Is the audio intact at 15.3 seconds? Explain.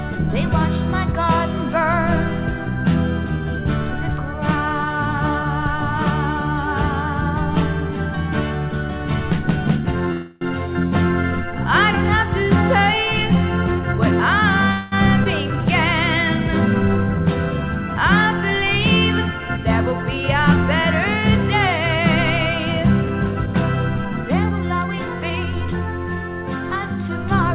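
No. A skip ahead at 15.24–15.28 s: about 150 ms of queued audio was discarded, so playback jumps forward, splicing the sound almost directly across a brief 17 ms gap.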